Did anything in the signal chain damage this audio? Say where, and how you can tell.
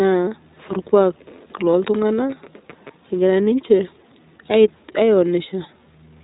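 Yes. Throughout the speech, the sound is slightly rough and synthetic, with nothing above 3.8 kHz. That points to the codec stage, specifically the iLBC codec, which fits 15.2 kbps. It codes each 20 ms frame's excitation independently, in a narrowband channel.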